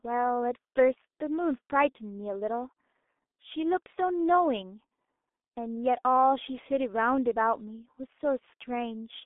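The clip is speech, and the whole of it has passed through the G.723.1 codec. Nothing reaches above about 3.8 kHz, and the usable band runs from roughly 250 Hz to 3.6 kHz. The result is muffled and thin. The coding damage is heavy. The codec works on 30 ms frames and updates its voice model slowly, so consonants smear and the tone turns hoarse. The sound points to a bitrate near 6 kbit/s.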